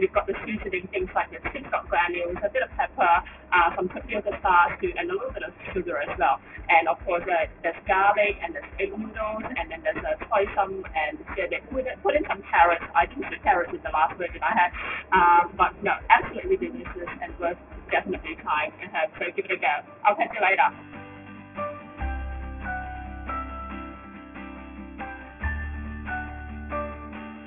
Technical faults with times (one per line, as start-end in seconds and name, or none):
0.00-27.46 aliasing